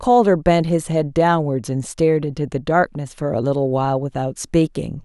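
No technical faults can be heard in this recording.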